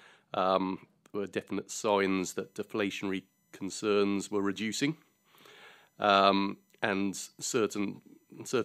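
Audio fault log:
1.85–8.64 s, USB whine: after "there were definite" a steady 1 kHz whine enters and persists to the end, its harmonics strongest near 20 kHz, roughly 45 dB below the speech, as current drawn in 1 ms bus frames leaks through power or ground.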